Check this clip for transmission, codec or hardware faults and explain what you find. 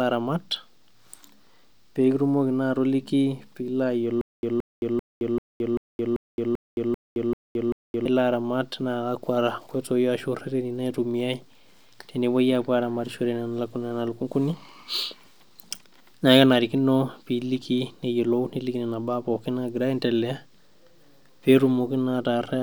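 One transmission fault is present, a stutter with silent gaps. From 4.21 to 8.05 s, after "pekitumoki naa atoliki piilo", a 172 ms fragment repeats ten times every 390 ms with 218 ms of dead silence between, likely a stalled stream replaying its last buffer.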